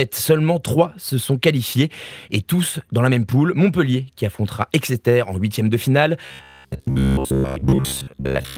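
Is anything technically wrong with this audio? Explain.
Yes. From 6.26 s to 8.57 s, after "en huitième de finale", audio likely arrived too late, so playback repeated a roughly 15 ms buffer in place of most of the real speech. The result is robotic sound from repeated short buffers: a rigid, metallic buzz at 66.7 Hz.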